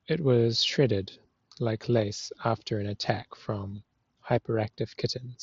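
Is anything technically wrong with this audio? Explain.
Yes. At 3.76 s there is concealed Bluetooth headset packet loss. About 15 ms of audio, which fits two consecutive mSBC frames, failed to arrive from the headset. The receiver filled the gap by repeating the closest-matching stretch of the preceding waveform, so there is no silence or click. It sounds like a brief buzzy smear followed by a slight warble as the real signal resumes. The wideband mSBC link itself carries the speech up to 8 kHz.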